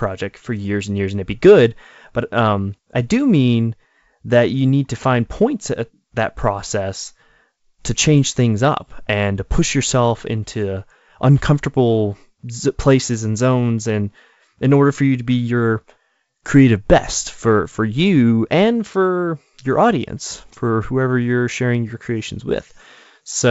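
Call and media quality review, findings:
Nothing stood out on listening to this speech over the G.722 wideband path at 64 kbit/s.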